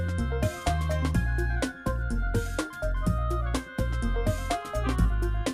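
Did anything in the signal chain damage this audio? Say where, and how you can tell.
No, the signal reaches the end of the chain intact, with nothing from any stage leaving an audible mark on it.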